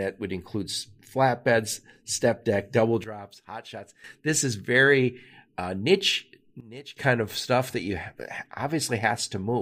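Just after "flatbeds step deck double", at 3.04 s, a sudden gain jump drops the speech and its background noise together by about 12 dB until 4.04 s. It happens again from 6.6 to 6.97 s, about 17 dB down, ending before "kind of stuff that". The likely cause is a digital gain change applied without a ramp. On the waveform, the envelope steps down and back up abruptly. On the spectrogram, these stretches show as uniformly dimmer blocks with sharp vertical edges.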